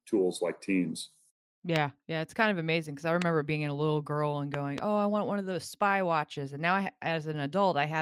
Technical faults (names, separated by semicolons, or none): loud pop